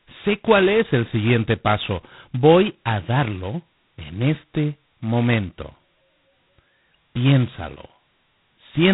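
The whole clip runs through G.726 ADPCM, and the heavy rasping hiss riding on the speech, rising and falling with its level, fits the 16 kbit/s mode, where each sample's prediction error gets only two bits. Nothing gets through above 3.9 kHz, so everything sounds muffled.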